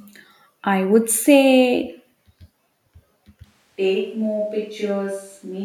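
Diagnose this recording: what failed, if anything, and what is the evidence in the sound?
The close microphone's feed likely dropped at the capture stage, forcing a switch to a distant microphone at 3.46 s that lasts to the end. The speech suddenly turns roomy and hollow, thinner in bass, about 10 dB quieter, with room noise roughly 35 dB below it.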